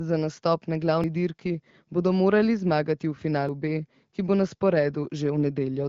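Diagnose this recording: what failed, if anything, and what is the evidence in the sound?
Audio missing between chunks, at 1.04 s and 3.49 s: the speech jumps forward, losing roughly 50 ms each time, first between "nastop na" and "dirki bodo morali zmagati". The two skips fall 2.45 s apart, matching a 2.5 s chunk, so the stage is likely the recorder's buffer handling, dropping audio while closing one chunk and opening the next. The waveform shows a hard splice with no silent gap, and the spectrogram shows harmonic tracks cut off by a sharp vertical seam.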